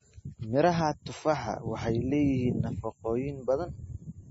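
From start to finish, the speech has nothing above 7.6 kHz. The treble is sliced off at a fixed line. The remaining sound is watery and swirly, with metallic chirps on the s sounds and smeared attacks. The damage is heavy. The likely cause is MP3 compression at a very low bitrate, around 24 kbps. Starved of bits, the encoder dropped the top band and zeroed weak frequency lines, which flicker on and off between frames.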